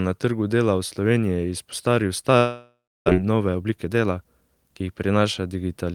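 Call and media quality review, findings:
Long network dropout, 2.37–3.10 s. Speech cuts out. The last sound is stretched into a fading buzz, then roughly 290 ms of silence. It resumes with about 400 ms of speech missing. Likely cause: packet loss on the network path, with receiver concealment filling the gap until it gives up.

Jitter buffer speed-up, 3.19–4.81 s, immediately after the dropout. Speech runs at about 117% speed with unchanged pitch and sounds rushed. Probable component: the receiver jitter buffer. Packets delayed by the outage arrived together and overfilled it. The receiver then trimmed short pitch-period segments in quick succession, removing roughly 0.3 s in total to bring latency back down.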